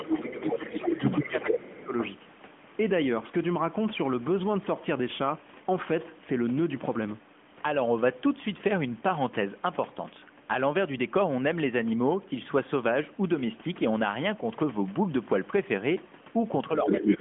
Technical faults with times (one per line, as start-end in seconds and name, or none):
0.00-1.59 other side's voice leaking through
0.43-0.98 speech suppressed in double talk
1.24-1.93 speech suppressed in double talk
1.99-2.10 other side's voice leaking through
16.86-17.20 other side's voice leaking through